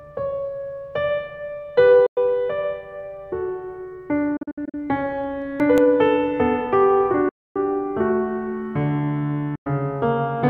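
The music cuts to silence from 2.06 to 2.17 s, and again in scattered gaps from 4.37 to 4.74 s, totalling 203 ms with the longest single hole 61 ms. This pattern is likely a Bluetooth dropout, where late wireless packets of roughly 20 ms each were discarded. Between 5.24 and 5.78 s come four brief CD scratch ticks, each about 2 ms or shorter. Here a disc blemish defeated error correction on successive rotations, leaving tiny clicks. Further dropouts follow at 7.29 to 7.56 s (264 ms) and 9.55 to 9.67 s (about 100 ms). Unlike the ticks, each dropout is a gap, after which the music resumes further along, as though it had kept playing.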